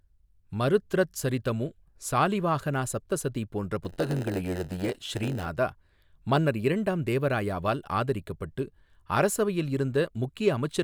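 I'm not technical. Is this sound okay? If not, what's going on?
No. Block size mismatch (padded), 3.84 to 5.49 s: speech gets tiny silent gaps about 92 times a second, causing a buzz and slowing it about 8%, timbre unchanged.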